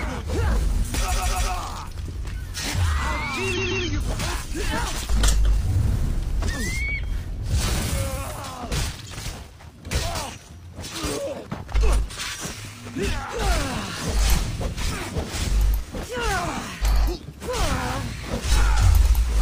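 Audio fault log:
1.07 to 1.49 s and 3.53 to 3.82 s, repeated frames: a stuttering repeat. A 139.3 ms block, which fits three compressed frames, plays three extra times, adding 418 ms, then twice more, adding 279 ms.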